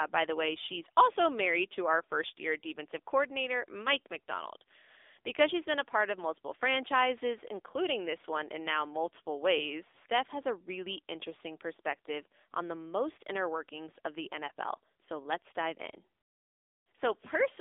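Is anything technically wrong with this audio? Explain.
Yes, the whole clip has been through the AMR narrowband mobile codec, the old 2G/3G phone codec. Everything above about 3.7 kHz is missing, and the usable band sits roughly between 300 Hz and 3.6 kHz, so the speech sounds boxed-in and phone-like. AMR models the voice with a vocal-tract filter driven by sparse pulses, and the damage here is plainly audible: a buzzy, synthetic edge from its 7.95 kbps mode.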